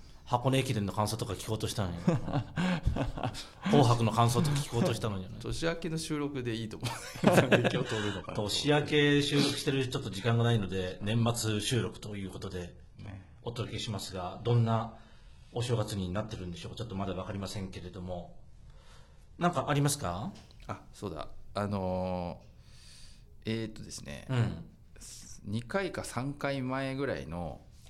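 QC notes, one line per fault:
7.71–19.71 s, adaptive stream at a lower bitrate. The stream drops to a much lower-bitrate version for 12 seconds, then returns. The switch is abrupt, with no gap. Nothing is left above 11.8 kHz, and the upper treble drops away. Codec artefacts rise across the stretch. The sound points to a fall from roughly 96 kbit/s AAC to about 16 kbit/s HE-AAC, where the top band is rebuilt rather than coded.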